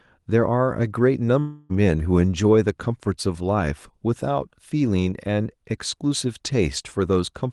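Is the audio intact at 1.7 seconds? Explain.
No, 1.7 s sits inside a long network dropout running from about 1.39 to 1.72 s. The gap is likely lost packets: the receiver keeps extending the last sound as a fading buzz for roughly 300 ms, then the real audio resumes with that stretch gone.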